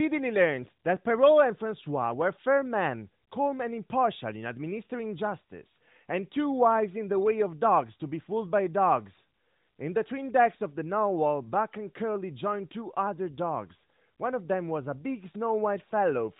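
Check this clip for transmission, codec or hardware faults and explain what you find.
No transmission, codec or hardware faults turn up anywhere in this speech.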